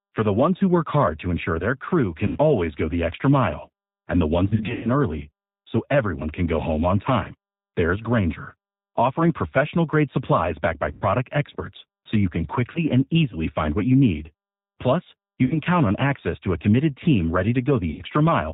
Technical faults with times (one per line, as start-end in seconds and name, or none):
0.00-18.53 G.729 codec
2.27-2.38 VoIP packet loss concealed by the speech codec
4.48-4.91 VoIP packet loss concealed by the speech codec
10.92-11.04 VoIP packet loss concealed by the speech codec
12.72-12.80 VoIP packet loss concealed by the speech codec
15.45-15.58 VoIP packet loss concealed by the speech codec
17.90-18.04 VoIP packet loss concealed by the speech codec